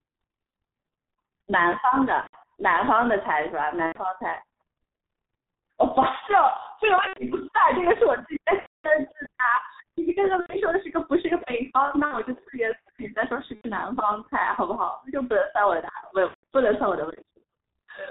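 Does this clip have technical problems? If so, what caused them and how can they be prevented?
Yes. Throughout, the speech is muffled and hoarse, with nothing above 4 kHz and smeared consonants. This is heavy G.723.1 codec damage, which fits its 6.3 kbit/s mode, with 30 ms frames and a slowly updated voice model. Using a wideband, higher-bitrate codec such as Opus prevents it.

The speech turns into a buzzy or noisy, fading sound at 2.21–2.37, 3.86–3.98, 7.07–7.22, 8.60–8.90 (the longest, about 240 ms), 10.40–10.58, 12.05–12.20, 13.55–13.69 and 16.28–16.43 s. This is VoIP packet loss concealed by the speech codec: the decoder stretched its last pitch and filter while lowering the gain, and the speech stays distorted briefly after packets resume. A more reliable network path with jitter buffering and forward error correction prevents it.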